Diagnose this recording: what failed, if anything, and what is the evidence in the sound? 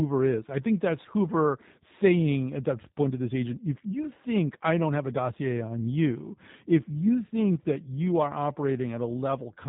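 The speech sounds slightly rough and synthetic from start to finish, with a closed-in, band-limited tone and no content above 3.8 kHz. This is G.729 codec damage at the codec stage: each 10 ms frame is rebuilt from a vocal-tract filter, pitch predictor and a few pulses, which fits an 8 kbit/s voice codec.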